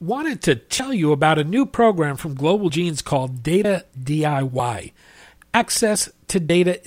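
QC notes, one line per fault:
0.79, 2.69, 3.64, 4.59, 5.54 and 6.49 s: audio missing between chunks. At each point, about 50 ms of speech drops out and the two sides join with no gap. The regular, roughly one-second spacing likely comes from losing audio at 1-second chunk boundaries.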